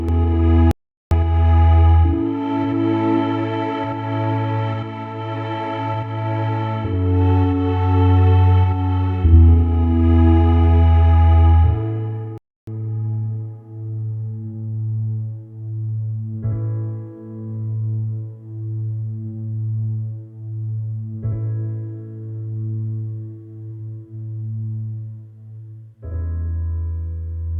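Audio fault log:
Throughout: channel delay (doubling). One side trails the other by about 85 ms, which fits a 4096-sample buffer, and once the two are folded to mono you get a second copy at the same level. It sounds like a tight slap echo on everything.
0.71–1.11 s and 12.38–12.67 s: playback stall. The audio cuts to silence for about 0.4 s and then about 0.3 s before picking up again. That's most likely the player running dry or its thread getting blocked until it caught up.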